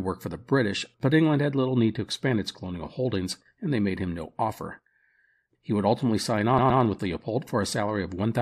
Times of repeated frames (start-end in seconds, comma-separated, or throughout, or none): 6.57-6.81